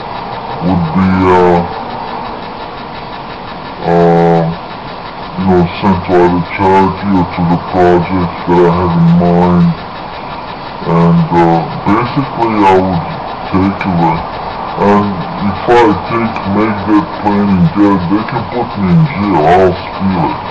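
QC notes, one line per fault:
Throughout, wrong sample rate. The audio plays back at two thirds of its proper speed, so everything runs slow and drags. Pitch drops with it, by just over seven semitones, a perfect fifth lower. Speed and pitch shift together because the samples are read out too slowly, with no conversion between rates. A 0.667 ratio fits material captured at 48 kHz but played at 32 kHz. The sound comes out low, heavy and sluggish.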